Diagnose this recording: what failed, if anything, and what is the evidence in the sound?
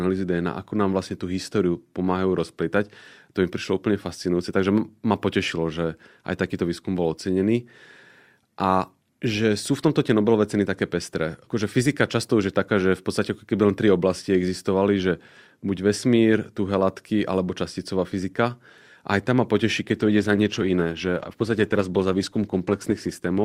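Adaptive stream at a lower bitrate from 19.83 s to the end: a network slowdown switched the speech abruptly, without a gap, to a lower-bitrate encoding, raising codec artefacts.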